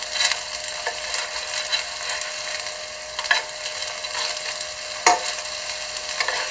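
Everyday sounds over a WebRTC call path, with nothing above 8 kHz, consistent with G.722 at 64 kbps, and no faults to report.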